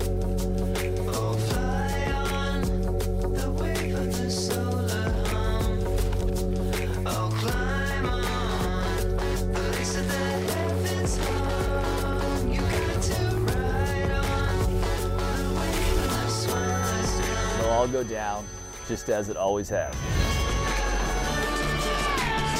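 From 16.36 s to 21.50 s a feedback whistle sits behind the sound: a thin, steady tone near 6.1 kHz, about 15 dB below the main signal, swelling and fading slowly in level. The likely cause is a loudspeaker-to-microphone loop held just at the edge of feedback.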